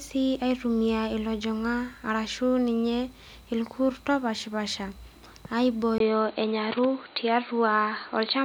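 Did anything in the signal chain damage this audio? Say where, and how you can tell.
Yes. At 5.98 s a brief silence of about 20 ms occurs, then the speech runs to the end with nothing above 4.6 kHz, a modest level shift and a new, faint background noise. The likely cause is the input switching to a poorer device, unlike a codec band limit, which wouldn't add fresh noise or a gap.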